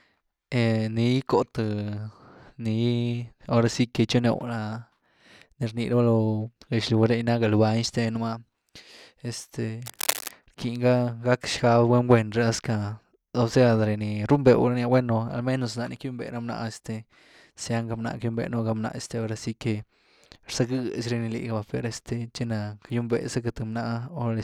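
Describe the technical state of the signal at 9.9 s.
At 9.9 s a burst of scratching, rustling noise sits over the speech, running from 9.86 s to 10.31 s and reaching a level only a few decibels below the speech itself. This is cable scratch noise, likely from a worn cable, connector or control being moved: as the contact shifts, its resistance jumps erratically and injects dense, irregular bursts of noise into the signal for that brief stretch.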